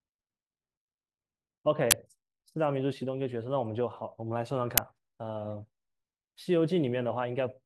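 At 1.91–1.93 s and again at 4.78 s, an uninitialised buffer plays leftover memory as samples: a loud crack or burst of digital noise, unlike the silence of a dropout.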